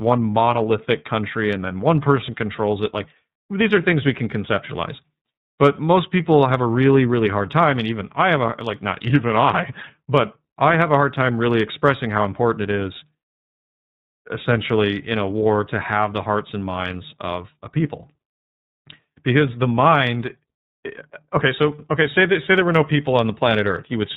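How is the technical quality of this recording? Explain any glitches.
The speech is limited by iLBC codec damage throughout all 24 seconds. iLBC codes each 30 ms frame's excitation independently, in a narrowband mode that fits about 13.33 kbps, so nothing above 4 kHz survives. The voice sounds muffled, slightly rough and plainly synthetic.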